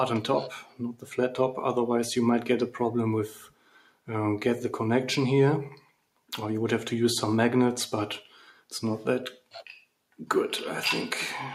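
A speech-style noise suppressor applied to music or sounds runs throughout, treating sustained content as noise and swinging the level by around 5 dB, visible as a gently pumping waveform envelope. Sound cut by the noise suppressor occurs at 0.63–1.08 s, 3.29–4.07 s, 5.77–5.95 s and 8.34–8.72 s, with held tones sinking by about 12 dB (about 10 dB in the last). On a spectrogram these appear as sudden dark gaps and truncated tails.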